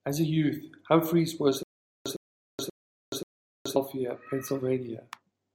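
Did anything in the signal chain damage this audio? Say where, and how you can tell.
Yes. From 1.63 to 3.76 s the speech hits a stutter with silent gaps: the same 107 ms fragment repeats four times, each followed by 426 ms of dead silence, every 533 ms. This is likely a playback or stream buffer stalling, replaying its last fragment, then running empty.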